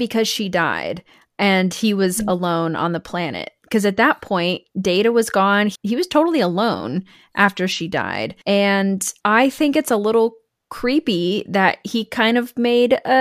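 No faults detected anywhere in this speech recording.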